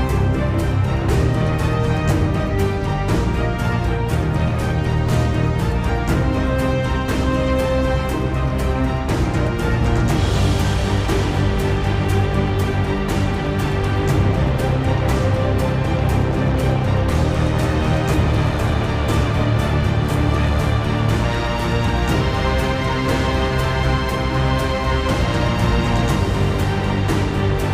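No technical faults can be heard in this audio. At no point does anything in the recording break, drop out or go wrong.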